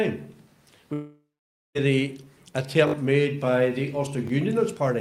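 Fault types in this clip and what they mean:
long network dropout: From 0.93 to 1.77 s the sound stops arriving, the last fragment is stretched into a fading buzz or hiss, then about half a second of silence follows. Audio resumes with roughly 0.82 s missing, likely from a network interruption.
repeated buffer: Late audio made the device replay its last 20 ms block, producing a brief buzzing stutter with hard joins. It repeats three extra times from 2.88 to 2.94 s and once more at 4.28 s, losing around 70 ms and 20 ms.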